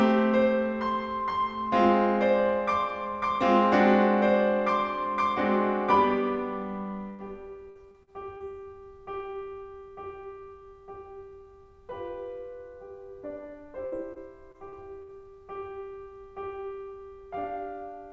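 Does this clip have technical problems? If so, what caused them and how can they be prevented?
Yes. A burst of packet loss hits from 7.10 to 7.22 s. The receiver stretches the last bit of music for about 90 ms, letting it fade, and then the music picks up again with roughly 90 ms skipped. A larger jitter buffer or forward error correction on the call link would prevent this.

Repeated packet loss (robotic sound) occurs from 7.70 to 8.43 s (four gaps, longest 52 ms, about 20% of the stretch patched) and from 13.86 to 15.12 s (five gaps, longest 63 ms, about 16% patched). Each hole is filled by continuing the previous sound, giving choppy music with pieces missing. Since this sits on a call path whose sound stops at 8 kHz, which fits G.722, improving network stability or adding packet redundancy would prevent it.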